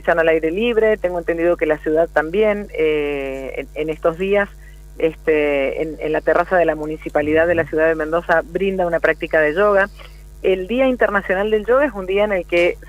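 No technical faults can be heard anywhere in this audio.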